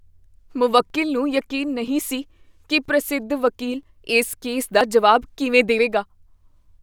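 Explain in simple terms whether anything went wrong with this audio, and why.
The recording was likely handled in one-second chunks, with a tiny slice of audio lost at each handover. This is audio missing between chunks: the speech skips about once a second, at 0.90, 1.88, 2.85, 3.83, 4.81 and 5.79 seconds, each gap a brief jump.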